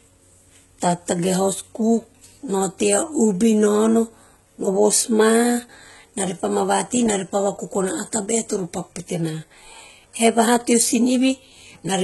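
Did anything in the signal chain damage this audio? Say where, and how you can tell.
Yes, at the codec stage, throughout the clip: the speech is heavily damaged and the treble stops dead at about 11.8 kHz, most likely from HE-AAC compression at a very low bitrate, around 16 kbps. HE-AAC codes only the lower band and rebuilds the top by copying lower bands upward under a coarse envelope. The treble therefore reaches higher than plain AAC would at that bitrate, but its harmonics don't line up with the real ones below the crossover.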